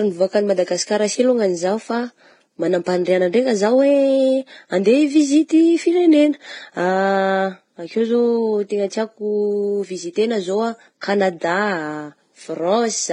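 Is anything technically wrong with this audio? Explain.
Yes, there's a problem across the whole clip: the speech sounds like it's been through transcoding between lossy codecs. Nothing comes through above 10 kHz, and two flavours of compression grit sit on top of each other: smeared, swirly texture plus a metallic, synthetic-sounding top end. The likely cause is a low-bitrate Vorbis encode that was later re-encoded to HE-AAC. The second codec wastes bits reproducing the first one's damage, adds its own, and the lowest bandwidth limit in the chain sticks.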